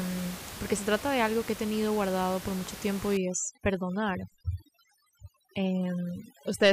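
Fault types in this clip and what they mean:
Overdone noise removal: from 3.17 s, after "guardado por mucho tiempo", to the end, an overly strong noise reducer mutes bands near its noise estimate, leaving a lowered background that breaks up into twinkling specks; a spectrogram shows scattered dots between words and ragged, hollowed harmonics.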